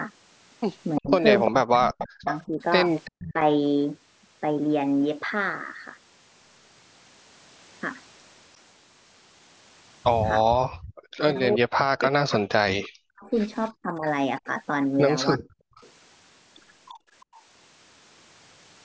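From 0.96 to 3.33 s a delayed copy of the speech trails the main voice by 346 ms, roughly 10 dB quieter. This is likely an echo leak: the far end's loudspeaker fed its microphone, and its echo canceller let part of that pickup return.

Over nearly the same span, 1.0 to 3.36 s, the talker's own voice dips sharply and breaks up, with the deepest cuts going very low and about a second affected in all. The likely cause is speech suppressed in double talk: with both sides active, the canceller could not separate the talker from the echo and turned both down.

From 10.66 to 10.94 s the room sound suddenly drops out, by about 40 dB for roughly 0.3 s, then returns. This is background gated by the echo canceller, which clamped the microphone while its loudspeaker played.

The echo leak returns from 11.02 to 17.42 s, again delayed by 346 ms and about 10 dB down. Within it, from 11.22 to 15.59 s, the speech is again suppressed in double talk, with deep, choppy dips adding up to around 1.5 s.

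Finally, from 16.93 to 17.34 s, the background is gated once more, falling about 36 dB for roughly 0.3 s before coming back.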